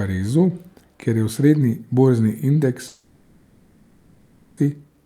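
Right after "borzni indeks", at 2.87 s, the speech stops and its last sound smears into a fading buzz that hangs on as low noise until 4.59 s. About 1.7 s of audio is simply gone, likely a long network dropout with the receiver padding the gap.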